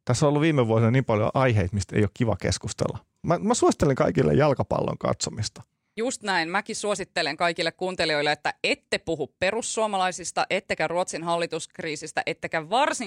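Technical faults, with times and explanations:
Nothing technical stands out here; the speech comes through without any audible faults.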